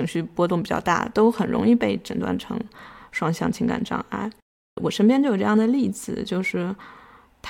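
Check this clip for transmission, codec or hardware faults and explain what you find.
No faults found in this recording.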